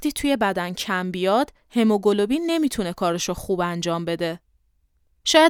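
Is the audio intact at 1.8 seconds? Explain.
Yes, the audio is intact at 1.8 seconds: there is no fault at that point, and the sound there carries no audible defect.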